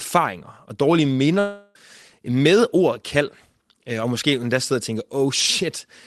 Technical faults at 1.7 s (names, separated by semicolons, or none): long network dropout